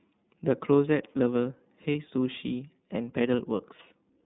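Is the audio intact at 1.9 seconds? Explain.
No. From 1.92 to 1.95 s, about 30 ms of lost iLBC frames, likely a single dropped frame, made the decoder repeat the last pitch cycle mixed with noise, so the gap sounds like a brief held, slightly buzzy vowel before the speech returns cleanly. Throughout, the iLBC codec, here at 13.33 kbps, limits the band to roughly 150 Hz to 3.7 kHz and gives the speech a plainly rough, synthetic edge.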